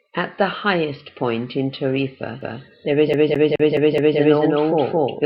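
At 2.41 s a doubled audio track begins and runs to the end. A second copy of the speech appears about a fifth of a second behind the first, at roughly the same loudness. It starts abruptly, with no fade. It carries no reverb or room colour, so it is not an echo. The result is a hard, slapback doubling of every syllable. This is likely a second capture through a slower path, or two copies of the speech mixed out of step.

From 3.13 s to 4.19 s the speech is also stuck on one turn, like a skipping CD. The same 212 ms slice plays five times in a row. Each jump back brings a brief mute. The stutter is fast and even, at the same spot each time. The speech stops moving forward and repeats mechanically. Because the doubling is still active, each repeat is heard twice.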